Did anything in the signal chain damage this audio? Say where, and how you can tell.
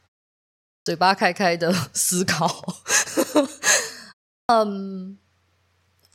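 Yes, at playback: a clipped start after a pause at 0.80 s and 4.43 s, each losing about 62 ms, so sound bursts abruptly out of silence. The output device sleeps through the pause and wakes late. Muted pauses would drop background, not onsets.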